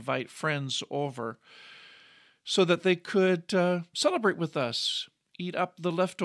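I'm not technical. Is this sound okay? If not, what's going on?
Yes, nothing wrong here.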